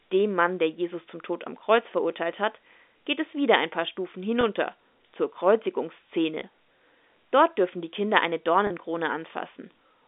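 At 4.41 to 4.43 s, 6.40 to 6.42 s and 8.67 to 8.70 s, the speech has packet loss with pitch repetition. About 20, 20 and 30 ms go missing. The receiver repeats the last pitch period to fill each gap. Each one sounds like a brief buzzy hold.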